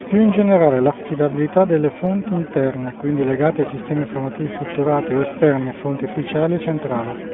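The speech runs through an iLBC codec for its whole length. The band is squeezed to roughly 150 Hz to 3.5 kHz, so it sounds thin and phone-like, with no air above. The codec damage is plainly audible. Each short frame is coded on its own, without help from the one before, which leaves a rough, slightly synthetic edge on the voice. The texture fits 20 ms frames at a rate near 15.2 kbps.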